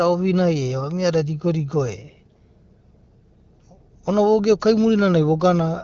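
No technical faults can be heard in the speech, which has the band-limited character of an AMR wideband (HD Voice) call, with nothing above 6.8 kHz and only light coding texture, consistent with a rate of 12.65 kbit/s.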